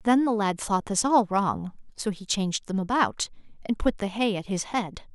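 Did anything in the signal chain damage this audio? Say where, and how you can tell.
No, no damage is audible.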